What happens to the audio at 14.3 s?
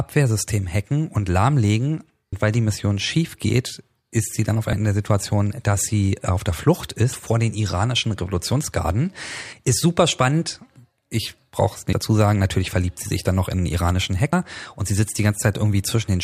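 At 14.33 s there's a quick skip in the speech: a brief piece of sound just vanishes and the audio on either side is butted straight together, with no gap of silence. It's audio missing between chunks, likely from a recorder or processor working in 2.5 s blocks and dropping roughly a tenth of a second while it hands off from one block to the next.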